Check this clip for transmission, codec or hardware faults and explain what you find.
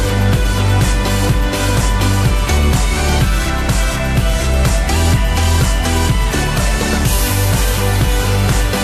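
No faults turn up in this clip.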